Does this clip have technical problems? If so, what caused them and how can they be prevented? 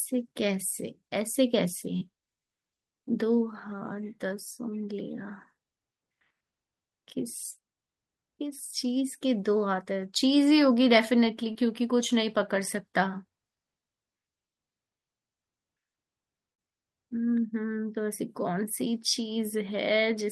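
Yes, two short concealed packet losses break into the speech, around 1.97 to 2.03 s, where about 40 ms of audio never arrived, and around 11.53 to 11.57 s, where about 20 ms went missing. Each time the receiver stretched the last sound forward to fill the hole and then blended back. Unlike a hard dropout or click, there is no silence or sharp edge, just a brief smeared wobble in the speech. The call path's band limit near 12 kHz comes from the codec and isn't part of these glitches. Preventing it means giving the call a steadier network link, for example wired instead of congested Wi-Fi, and a jitter buffer with enough depth to absorb late packets.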